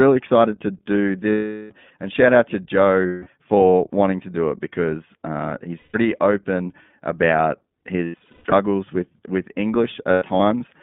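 Throughout, the iLBC codec limits the band to roughly 150 Hz to 3.6 kHz, consistent with its 15.2 kbps mode, and its coding adds a plainly audible rough, synthetic edge. Lost iLBC frames appear at 1.30 to 1.72 s after "excited to do", 3.06 to 3.29 s, and 5.78 to 5.96 s, then scattered across 8.04 to 8.54 s and 10.12 to 10.41 s in runs up to about 100 ms. The decoder fills each gap with a repeated pitch cycle and noise, heard as a held buzzy vowel that clears immediately afterward.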